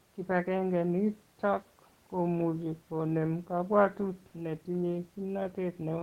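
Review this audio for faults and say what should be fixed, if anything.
No faults found; nothing here needs fixing.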